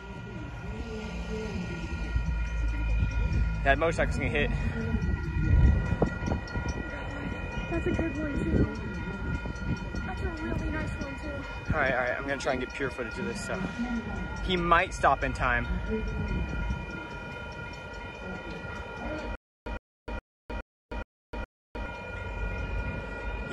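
A stutter with silent gaps runs from 19.35 s to 21.86 s. The same 110 ms burst repeats six times, each followed by 308 ms of digital silence, in a steady 418 ms cycle. The stream likely stalled, replaying its last fragment at each retry, and the intended audio is lost.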